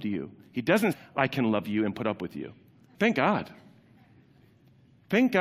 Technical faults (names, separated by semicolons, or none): damaged data in a compressed stream